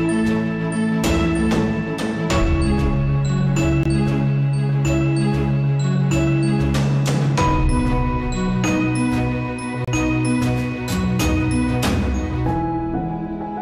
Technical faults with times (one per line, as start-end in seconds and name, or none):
3.83-3.86 gap between stream segments
9.85-9.88 gap between stream segments